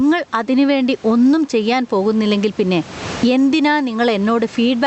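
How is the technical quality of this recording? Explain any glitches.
The recording suffers from gain pumping throughout the speech. The level pumps with the talker, a gain swing of around 20 dB. That points to an input gain set far too high, with a fast limiter or compressor likely clamping it on each peak. Loud and quiet passages end up squashed toward one level. The room noise sits about 32 dB below the speech. The treble stops near 8 kHz, consistent with an Opus call path at a moderate bitrate.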